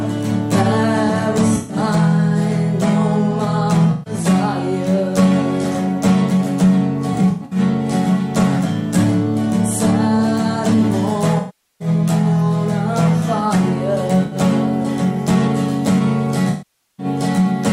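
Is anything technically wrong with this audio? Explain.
Yes. AAC frame loss with concealment occurs six times: 1.56–1.77 s, 3.91–4.14 s, 7.13–7.59 s (losses scattered over about 384 ms, longest run around a tenth of a second), 11.38–11.88 s, 14.24–14.36 s and 16.50–17.06 s. With frames missing, the decoder rebuilds the gap from the last good spectrum, so the sound turns smeared and noisy. In the longer gaps it sags toward silence before recovering. A spectrogram shows blurred, static bands, and the waveform shows dips in the envelope.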